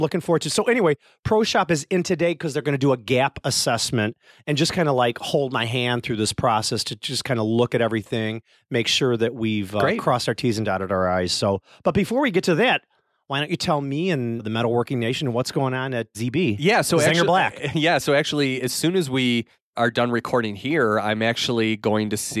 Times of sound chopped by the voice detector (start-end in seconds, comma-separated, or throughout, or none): none